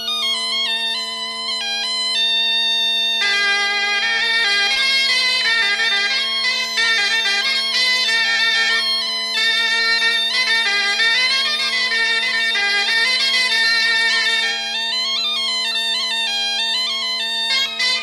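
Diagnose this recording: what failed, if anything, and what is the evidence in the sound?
Nothing failed; no faults heard.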